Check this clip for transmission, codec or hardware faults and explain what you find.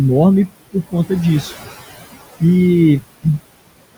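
One fault runs through the whole speech clip: noise suppressor artifacts. The suppressor pulls down the bands it judges to be steady background, by about 18 dB, frame by frame. The room noise, sitting about 15 dB below the speech, sinks in the pauses and comes back up under each phrase. Unlike a simple noise gate, which switches everything off at once, this cut works band by band.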